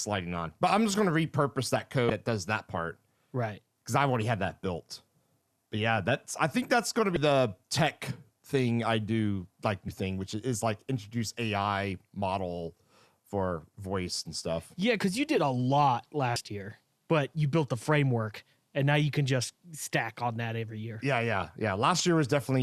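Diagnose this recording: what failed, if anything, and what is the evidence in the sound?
Short glitches at 2.07, 7.13, 9.85, 16.33 and 21.99 s indicate damaged data in a compressed stream: corrupted codec frames break decoder sync until it resyncs.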